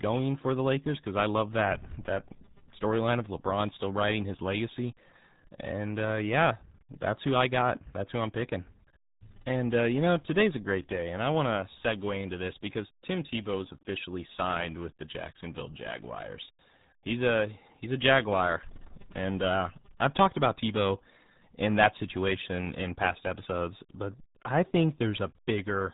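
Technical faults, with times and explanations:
Throughout, RealAudio 14.4 codec: gargly, muffled speech with nothing above 3.9 kHz; heavy coding smear, not mere filtering, which fits an 8 kbit/s dial-up codec.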